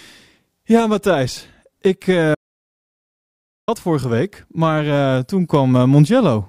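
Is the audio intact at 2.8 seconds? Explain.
No. An audio dropout to silence runs from 2.35 to 3.68 s, likely a lost input written as silence, leaving dead silence, no room tone, before "vorige week maar eh".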